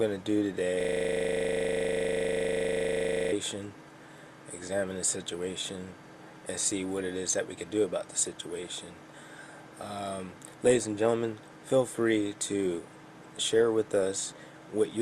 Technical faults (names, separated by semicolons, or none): system hang loop